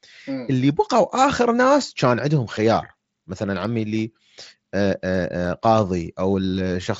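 No faults are present; the speech comes over a Bluetooth mSBC headset link, which cuts the band off at 8 kHz and leaves a light grain on the loudest syllables.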